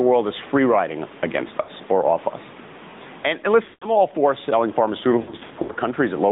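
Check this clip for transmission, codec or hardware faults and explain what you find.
Three faults stand out: steady gain pumping, narrowband mobile codec coloration, and three patches of lost AMR speech frames.

Gain pumping runs through the whole clip. The faint room noise sits about 32 dB below the speech, and the gain swings by roughly 15 dB. Loud and quiet passages sound squashed together. The likely cause is input gain set far too high, with a fast limiter pulling the level down on every loud syllable.

The AMR narrowband mobile codec also affects the entire clip. The speech sounds boxed-in and telephone-like, with plainly audible buzzy, synthetic roughness. Nothing passes above about 3.7 kHz or below 150 Hz. This matches AMR-NB at around 10.2 kbps, which rebuilds the voice from a vocal-tract model driven by a few pulses instead of carrying the waveform itself.

Lost AMR speech frames occur at three points:

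From 1.62 to 1.70 s, a 60 ms gap draws the sound out briefly.

From 3.64 to 3.86 s, a 180 ms run smears and drags the sound, which fades toward silence before the speech returns weak or rough.

From 5.22 to 5.73 s, losses scattered across about 480 ms, the longest run lasting 80 ms, cause repeated brief dips and warbles.

In each case, corrupted frames failed their checks, and the decoder repeated the last good pitch and vocal-tract settings at a falling gain.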